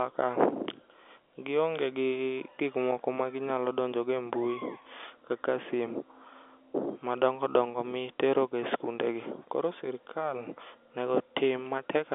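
No technical faults are audible.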